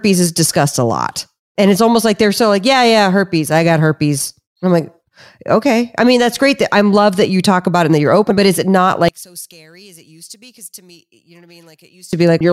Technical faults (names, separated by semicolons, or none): one channel inverted